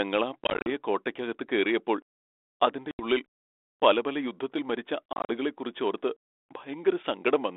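Packet loss on an ADPCM call breaks up the speech at 0.44–0.67 s, just before "കോട്ടയ്ക്കകത്ത് കേറിയപ്പോൾ", at 2.91–3.05 s, and at 5.13–5.33 s, after "പല പല യുദ്ധത്തിൽ മരിച്ച". Lost packets become silence, which shows as hard-edged flat gaps in the waveform, with runs of up to 40 ms in the first and third stretches, and as blank vertical bands on a spectrogram. Each time the sound returns, the decoder's predictor and step size are out of step with the sender's, so it comes back slightly distorted.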